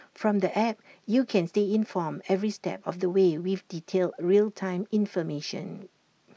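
No faults found anywhere in the speech; nothing needs flagging.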